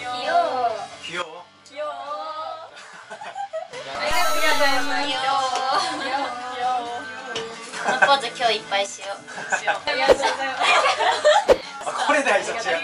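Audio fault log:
1.22–3.73 s and 7.73–8.86 s, sudden gain jump: the level drops by about 12 dB, then later rises by about 6 dB, each switching instantly and restoring abruptly. Background noise steps with the sound, likely from a gain change applied without a ramp.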